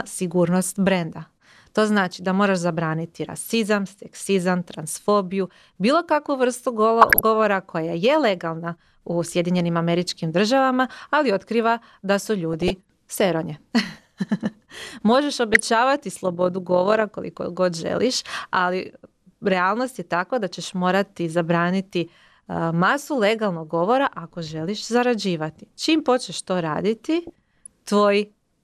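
Short blips of noise break over the speech from 7.01 to 7.21 s, between "transfobiju bilo kakvu vrstu" and "koja je legalna u", again from 12.54 to 12.81 s after "ali otkriva da su", and from 15.54 to 15.67 s. This is DAB burbling: bit errors at a fraction of a percent slip past error correction and corrupt MP2 samples and scale factors, so single sub-bands jump in level for up to a frame.

From 16.21 to 17.03 s, just before "koliko god želiš ali", a fast, rough flutter of about 6 dB at around 40 Hz is overlap-add ripple. Windowed frames were rejoined with an overlap that doesn't sum to constant gain.

Burbling returns from 27.27 to 27.67 s.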